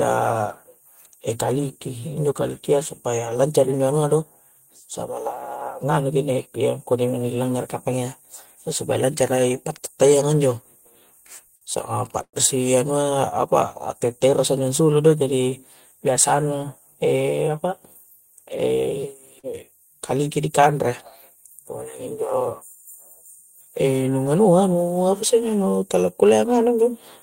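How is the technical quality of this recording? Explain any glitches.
The recording has three brief network glitches in the speech, two close together near the 12-second mark and one later.

From 11.55 to 11.64 s there is a short stall from a late packet. A packet arrived behind schedule and the jitter buffer ran dry, so the receiver held the last sound for about 59 ms until it came in, then resumed from the same point. Nothing is lost; a sound is drawn out slightly with a faint buzz or dip, and everything after it plays 59 ms later. Unlike concealed loss, the speech continues intact rather than skipping.

From 12.22 to 12.36 s comes a call audio freeze. The sound is held as a fading buzz or hiss and then drops to silence for about 70 ms, with roughly 111 ms of filler in total before the speech picks up exactly where it stopped. The likely cause is packets held up in transit, leaving the jitter buffer empty for longer than in the first stall. 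The audible silence after the fade is what marks it as a freeze rather than a short stall.

From 19.39 to 19.46 s there is short concealed packet loss. About 40 ms of audio never reached the decoder in time, and the receiver covered the gap with about 39 ms of sound extrapolated from what came before, then blended back into the real signal. It is heard as a quick smear or wobble, and a short consonant may be missing. Unlike the two stalls, this one adds no delay: the speech jumps forward, and that portion is gone rather than postponed.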